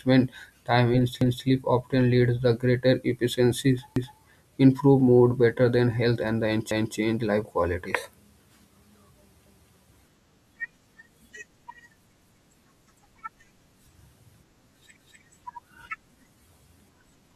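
At 1.21, 3.96, 6.71, 9.46 and 14.96 s the speech stutters briefly, the signature of overlapping chunks. The audio was handled in blocks of about 2.5 s, and each block begins 250 ms before the previous one finished, so that quarter-second of speech plays twice at every join. The result is a short repeated fragment at the seam, recurring at a near-regular spacing through the clip.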